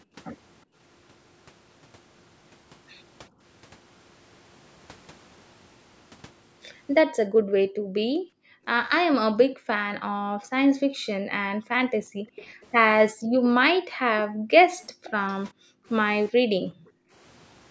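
Background gated by the echo canceller first appears from 7.28 to 8.65 s and again from 9.47 to 12.36 s. While the far end's audio played through the loudspeaker, the canceller clamped the microphone, so the room sound falls away by up to about 40 dB and returns when the canceller releases.

Echo leak follows from 12.36 to 12.65 s, a faint copy of the sound arriving about 0.4 s late and roughly 20 dB down. The likely cause is loudspeaker pickup that the echo canceller failed to remove.

The gating recurs from 13.14 to 13.34 s and from 13.71 to 15.04 s. A second, fainter echo, about 25 dB down at the same 0.4 s delay, overlaps from 14.83 to 15.33 s. The last background dropouts come from 15.53 to 15.86 s and from 16.31 to 17.14 s.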